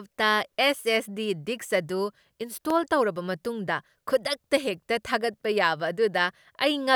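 At 2.70 s a single sharp snap cuts across the speech, an electrical switching spike lasting only about a millisecond and peaking somewhere around -15 dBFS. It is most likely a nearby switch or static discharge arcing briefly and being picked up on the audio line. On a waveform it appears as one isolated needle; a spectrogram shows a thin vertical line spanning the full frequency range.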